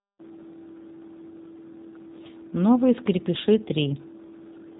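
G.729 codec damage runs throughout the whole clip. The speech is rebuilt from a vocal tract filter, a pitch predictor and a few pulses per 5 ms, which fits an 8 kbit/s coder. It sounds plainly rough and synthetic, with nothing above 3.8 kHz.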